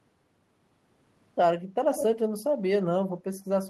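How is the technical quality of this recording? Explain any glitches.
The recording has one brief glitch. From 1.94 to 2.06 s there is an echo leak: a copy of the speech returns 120 ms late, only a few decibels quieter. A far-end loudspeaker echo that the canceller failed to remove is the likely cause. On a waveform it appears as a smeared second burst; a spectrogram shows the harmonic pattern repeated and shifted right.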